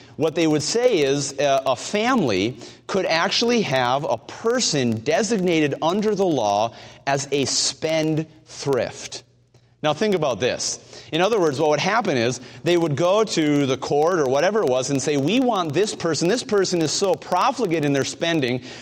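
From start to finish there's a filter restarted on every block: it drops its state and begins each block from silence, so a small transient lands at every boundary. You get a buzz around 21.5 Hz riding the sound's level, which fits 2048-sample blocks.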